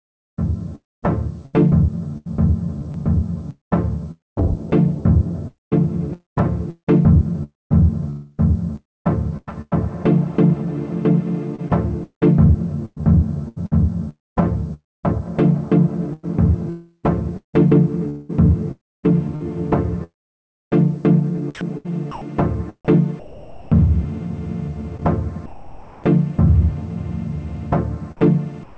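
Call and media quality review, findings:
Sound chopped by the voice detector, 0.75–21.89 s: intermittent gating, about 3.7 s in total swapped for comfort noise. Likely cause: sender VAD toggling DTX. On the spectrogram, real texture alternates with smooth, uniform noise blocks. The waveform shows chopped segments.

Same fault, 13.02–22.96 s: about 0.56 s replaced. Synthetic background between active segments, with abrupt texture changes at segment edges.

Same fault, 18.72–26.04 s: about 2.3 s replaced. Repeated gaps with featureless noise fill. The spectrogram shows flat patches lacking the real background's fine detail.

Long network dropout, 16.70–17.05 s: about 340 ms of audio missing. Likely cause: packet loss burst exceeding the jitter buffer. Concealment extends the last sound as a fading buzz or hiss, then about 100 ms of silence. The spectrogram shows a smeared, decaying band, then a blank column. 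The waveform shows an envelope tapering to flat before the return.

Comfort noise in place of the background, 28.63 s to end (about 0.14 s): the real background is replaced by steady synthetic noise about 10 dB quieter. Likely cause: DTX pause filled per RFC 3389. The background already sits about 22 dB below the loud parts. The spectrogram shows a smooth, textureless floor. The waveform shows a step down in noise amplitude. Band limit at 8 kHz, consistent with a G.722-type wideband call path.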